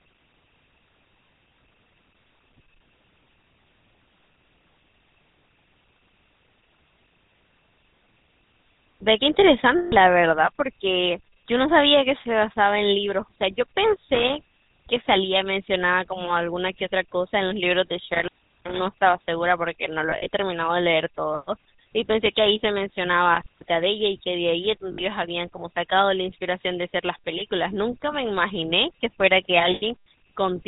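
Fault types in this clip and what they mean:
GSM full-rate codec: The speech passes through a vocal-tract model driven by a sparse, regularly spaced pulse excitation, with nothing kept above 4 kHz. That fits the 13 kbit/s full-rate coder. Throughout the clip the damage is plainly audible: the voice has a buzzy, gravelly roughness, and its upper range is cut off so it sounds narrow and dull.
lost GSM frames: When frames go missing, the decoder repeats the last good frame's settings. Each gap is filled with a rough, metallic ring instead of silence. This happens at 9.78 to 9.97 s (140 ms), around 20.1 to 20.29 s (80 ms spread over 160 ms, none much longer than 40 ms), at 24.92 to 25.02 s (60 ms) and at 29.74 to 29.83 s (80 ms).
intermittent contact: A loose cable or plug breaks the signal path for a moment. The speech cuts out with crackle at each edge, and faint hiss remains while the line is open. 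The dropouts come at 14.15 to 15.13 s (open about 450 ms), 18.14 to 18.79 s (about 375 ms) and 23.34 to 23.68 s (about 200 ms).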